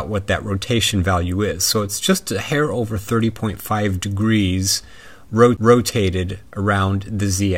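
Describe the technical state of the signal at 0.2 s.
At 0.2 s the signal is intact, with no audible technical fault at that moment.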